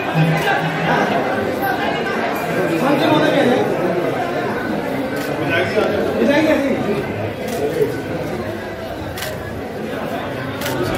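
At 5.84 s there is a single point where the audio jumps forward without any gap. A few milliseconds of sound are missing, and the two sides are butted together. The likely cause is a dropped buffer (overrun), where the hardware overwrote samples before the program read them.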